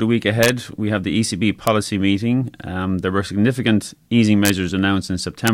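A speech recording with sharp, violent cracks at 0.43 to 0.49 s just before "we have the", at 1.67 s, at 4.45 to 4.49 s after "there were significant easing", and at 5.47 s. These cracks are integer overflow: peaks pushed barely past full scale, by about 1 dB or less, wrapped to the opposite sign instead of being limited.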